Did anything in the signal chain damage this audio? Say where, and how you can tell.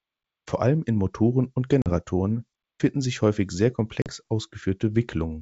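Yes, at the network stage: packet loss on an ADPCM call. The speech drops into hard-edged silence at 1.82 to 1.93 s, and again at 4.02 to 4.12 s just after "finden sich häufig sehr". Each hole is about 40 ms of missing audio, roughly a couple of packets. After each gap, the G.722 decoder's adaptive predictor and step size no longer match the sender's. The speech comes back with some distortion, at times off-level or with a click, until they realign.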